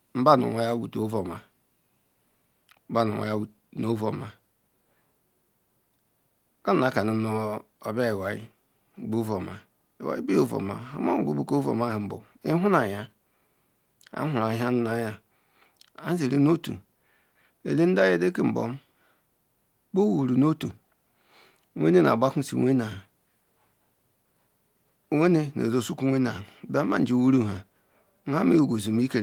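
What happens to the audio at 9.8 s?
Nothing goes wrong at 9.8 s: the audio is intact there, with the Opus voice compression running in its hybrid mode at about 24 kbps and leaving only light coding traces.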